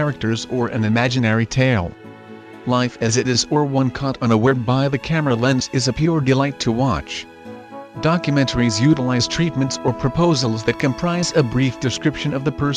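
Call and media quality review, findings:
Loud pop, 10.80–10.82 s, single, roughly 5 dB above the sound, which continues underneath, so not a dropout. Likely a voltage pulse from plug, switch, static or driver glitch.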